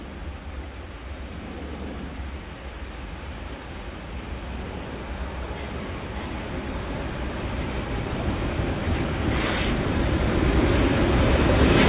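No technical faults can be heard anywhere in this audio.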